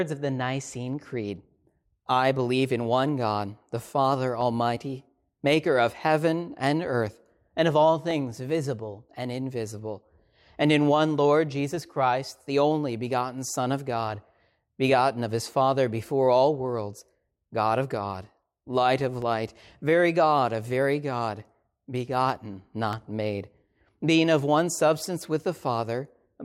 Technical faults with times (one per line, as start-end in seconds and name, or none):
0.71-22.93 clock drift buffer slips